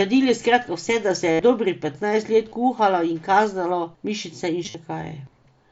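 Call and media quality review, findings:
Concealed Bluetooth headset packet loss on the headset-to-phone link. 1.32–1.40 s, after "skratka vse da se": 75 ms buzzy held tone, slight warble as "dobrih petnajst" resumes. 2.49–2.52 s, after "dobrih petnajst": 22.5 ms. 4.64–4.75 s, after "kazalo mišice": losses scattered over 105 ms, longest run 45 ms. The receiver loops the best-matching recent waveform slice. The spectrogram shows evenly spaced harmonic stripes, and the waveform shows flat-envelope repeated cycles. The mSBC wideband path carries audio up to 8 kHz.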